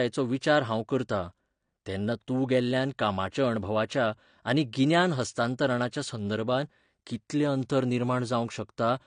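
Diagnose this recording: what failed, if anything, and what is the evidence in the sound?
Codec stage: throughout, nothing above 9.7 kHz and warbling, smeared sibilants, likely AAC compression, fitting about 32 kbps; a plain low-pass filter wouldn't warble.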